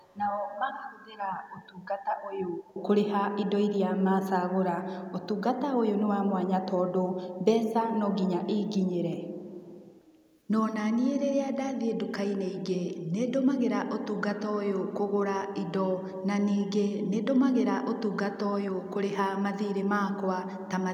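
Faint delayed copies of the speech at 0.0–0.16 s, 1.61–1.87 s, 2.64–2.74 s and 9.94–10.38 s, each trailing by 290 ms, are echo leak, likely from an echo canceller letting loudspeaker sound through. They are discrete repeats, not reverberant smearing. At 13.02–13.13 s the room background drops by about 9 dB for roughly a tenth of a second, then returns. This is background gated by the echo canceller, not a full dropout.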